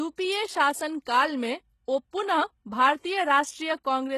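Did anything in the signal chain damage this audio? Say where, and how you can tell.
Yes, at the codec stage, across the whole clip. The speech shows plainly audible damage throughout. Sibilants sound gritty and lispy, and nothing sits above about 12.3 kHz. This is likely HE-AAC compression at a low bitrate, consistent with roughly 16 kbps. The upper band is rebuilt by copying lower bands upward under a coarse envelope. Unlike a plain low-pass or band-limited codec, the treble stays bright, but its harmonics don't line up with those below.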